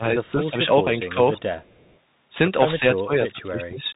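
The whole thing comes through the Bluetooth CVSD headset codec: nothing above 3.8 kHz, with scratchy s sounds and a grainy hiss from the one-bit step coding. From 0.0 to 0.86 s the speech is pushed down in chunks, up to about 20 dB, likely speech suppressed in double talk as the echo canceller ducks both sides. There's a faint echo leak at 0.25 to 0.31 s, a copy of the speech roughly 281 ms late and about 40 dB down, likely speaker-to-mic pickup that wasn't fully cancelled. Short dips follow at 1.12 to 1.18 s (about 10 dB) and 1.42 to 1.46 s (about 15 dB). The same faint echo returns from 1.63 to 1.97 s. From 2.79 s to the end the speech keeps ducking, up to about 20 dB.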